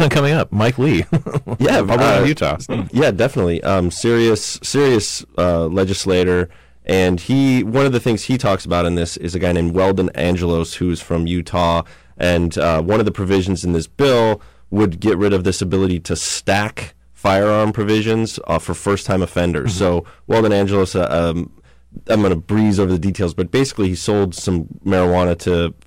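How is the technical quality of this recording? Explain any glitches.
The recording has one persistent problem, hard clipping, present from start to finish.

Hard clipping runs throughout the speech: the level was driven roughly 14 dB beyond what the stage could pass, so around a tenth of samples hit the ceiling and were cut flat. Those squared-off peaks add high harmonics, heard as harsh fuzz on every louder syllable.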